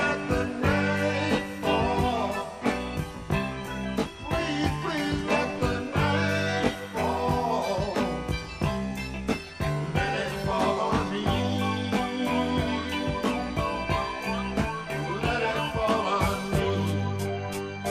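Rough, slightly doubled colouring runs throughout: channel delay (comb filtering), one channel lagging around 20 ms before the mono sum, carving fixed notches upward from near 30 Hz.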